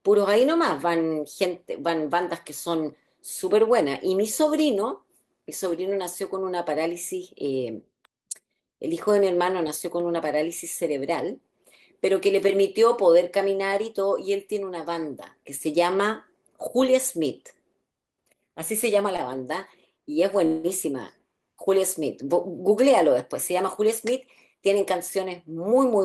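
A speech clip with three network-playback faults. At 19.16 s a short stall from a late packet holds the sound for about 23 ms, showing as a brief smeared, repeated stretch on the spectrogram before it resumes. From 20.46 to 20.67 s a call audio freeze sustains the last sound as a fading buzz for 175 ms, a flat, blurred band with no gap of silence in the waveform, likely from delayed packets draining the jitter buffer. From 22.53 to 25.25 s a jitter buffer speed-up plays the audio at about 106% speed with unchanged pitch, trimming roughly 150 ms through many small cuts that compress the spectrogram's timing slightly.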